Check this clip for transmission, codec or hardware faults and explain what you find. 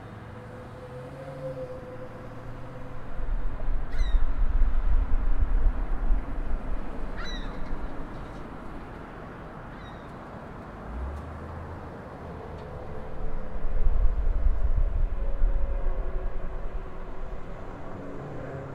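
Checking this clip turns up no faults to explain.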